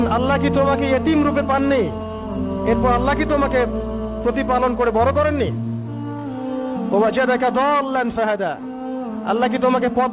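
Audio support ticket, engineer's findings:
Signal consistent with a normally working WebRTC call path: band-limited with nothing above 4 kHz, which fits a G.711 A-law codec at 64 kbps, and no faults found.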